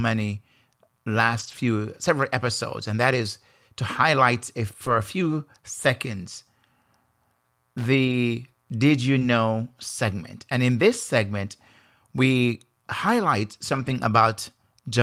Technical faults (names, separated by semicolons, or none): lost packet rebuilt from error correction; loose connector crackle; short concealed packet loss